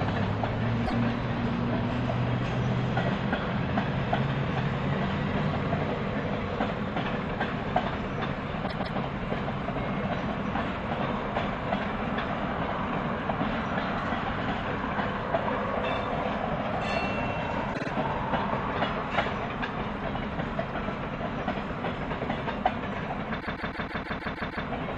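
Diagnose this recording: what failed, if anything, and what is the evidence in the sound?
Repeated frames at the storage or network stage: the decoder replays compressed blocks at 0.85, 8.66 and 17.73 s, then loops a 157 ms chunk from 23.39 to 24.65 s.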